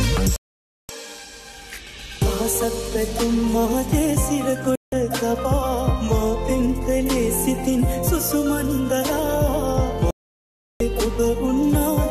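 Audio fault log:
0.36 to 0.90 s, 4.75 to 4.93 s and 10.11 to 10.81 s: digital broadcast dropout, three mutes of about 0.53 s, 0.17 s and 0.70 s. Each time the receiver stopped getting usable frames and went silent until valid ones arrived, so the sound drops to clean silence and resumes further along, with the missing stretch simply gone. Unlike packet-loss concealment, nothing is repeated, smeared or synthesised to fill the holes.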